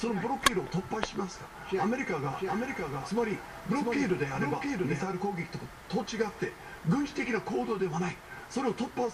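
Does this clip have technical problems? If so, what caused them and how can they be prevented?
Yes. From 2.33 to 5.03 s there is a doubled audio track: a full-band copy trails the original by roughly 0.7 s, about 5 dB quieter, starting and stopping abruptly. A spectrogram shows the same pattern repeated, shifted right, with no decay. The likely cause is a second, slower capture path or an edit holding two offset copies. Route the source through one capture path only, and check edits for overlapping duplicate regions.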